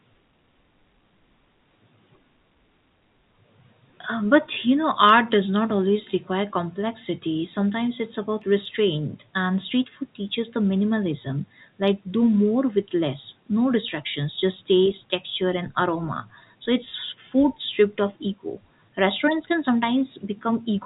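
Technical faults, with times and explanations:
No technical faults are heard in this clip.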